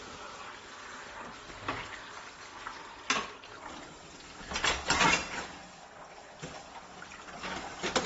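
From start to finish there's a dull, smeary, fizzy texture with nothing above 7.7 kHz, likely AAC compression at a low bitrate, something like 24 kbps. At 3.57 s the rest runs at the wrong speed, about 0.69 times normal, so everything drops roughly seven semitones and drags, likely from being played against the wrong clock.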